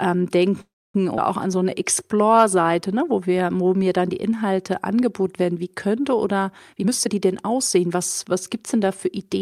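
At 0.61 s the speech stops and a brief fading buzz or hiss gives way to silence until 0.96 s. This is a call audio freeze. Packets were likely held up and the jitter buffer ran dry. About a third of a second was inserted, and nothing was lost.

From 1.16 to 1.20 s there is a skip ahead, just before "auch an". Roughly 150 ms of speech is dropped. The two sides are joined almost directly, so the sound jumps forward with barely any gap.

Right after "auch an", from 1.48 to 2.98 s, comes a jitter buffer slow-down. Pitch periods are repeated to rebuild the reserve. The speech runs at 91% speed, 139 ms longer, with stretched sounds at unchanged pitch.

After "werden wie könnte oder", from 6.72 to 9.37 s, a jitter buffer speed-up takes over. The buffer held too much audio, so short pitch-period pieces are cut. Roughly 300 ms disappears. The speech plays at 111% speed and sounds hurried.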